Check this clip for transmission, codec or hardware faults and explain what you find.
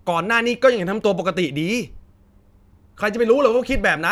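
Checking the clip turns up no faults to explain.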